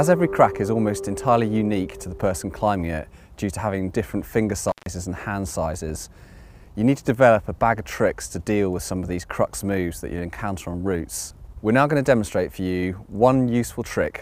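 At 4.68 s the audio abruptly drops out with a crackle at each edge, leaving only faint hiss for about 144 ms before returning by 4.86 s. This is an intermittent contact: a loose cable or plug briefly opened the signal path.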